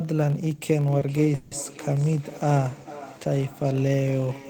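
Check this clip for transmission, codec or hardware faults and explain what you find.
Four faults are audible in this speech clip: one runs through the whole recording, and three start within its first two seconds.

Throughout, a filter restarted on every block loses its state at each block boundary and begins again from silence. Each restart leaves a small transient, heard as a steady 43.1 Hz buzz that rises and falls with the speech level. That rate fits a 1024-sample block at 44.1 kHz.

From 0.81 s to the end, there is feedback echo between two devices. A second device in the same room replays this call, and the microphone here picks that playback up again, which its echo canceller cannot remove. Each phrase returns roughly every 0.4 s, thinner and ringing, peaking at about 17 dB below the speech.

At 0.99–1.03 s, a short stall from a late packet occurs. The jitter buffer ran dry, so the receiver held the last sound for 20 ms until the packet arrived. 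Nothing is lost, but that sound is briefly over-long, with a slight buzz or dip.

At 1.35–1.53 s, a longer hold of 160 ms interrupts the speech, filled with a fading continuation of the last sound rather than silence. This is likely a call audio freeze: delayed packets emptied the jitter buffer. Playback then resumes where it stopped, inserting a gap without losing audio.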